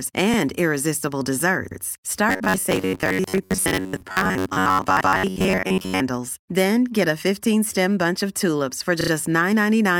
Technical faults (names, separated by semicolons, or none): repeated frames; robotic sound from repeated short buffers